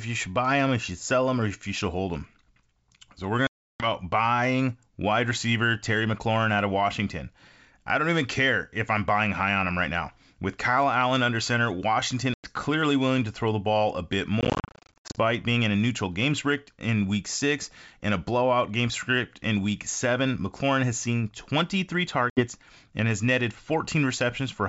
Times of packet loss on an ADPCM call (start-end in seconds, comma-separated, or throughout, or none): 3.47-3.86, 12.34-12.46, 14.41-15.19, 22.30-22.47